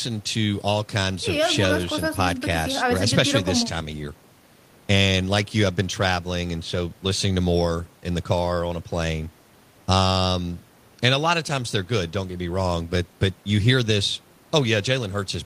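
No technical faults are audible.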